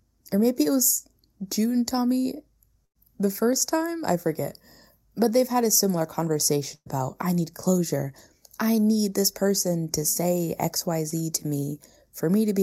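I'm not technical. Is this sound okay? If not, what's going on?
No, there are three kinds of problem here.

The first runs through the whole clip. It is channel delay (comb filtering). One side of the recording arrives a tiny fraction of a millisecond later than the other. When the two are mixed together, some frequencies cancel out, starting at around 3 kHz and repeating higher up. That takes the crispness out of the speech. It sounds hollow and dull from start to finish.

The second is a burst of packet loss, and it happens twice. Part of the call never arrived in time. The first gap runs from 2.85 to 2.97 seconds, just before "the first time I". About a tenth of a second is lost. The receiver covers it by stretching the last sound, so you hear a brief buzz or hiss. The second runs from 6.75 to 6.88 seconds, just before "I need closure I". About 120 milliseconds are lost there. The filler fades away and leaves a short silence before the speech comes back. 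In both places the speech jumps ahead, and a bit is simply missing.

The third is a short concealed packet loss at 11.10 to 11.14 seconds, right after "this person to say". Only about 20 milliseconds went missing. The receiver patched it by continuing the previous sound and blending back in. The result is a tiny smear or wobble in the speech.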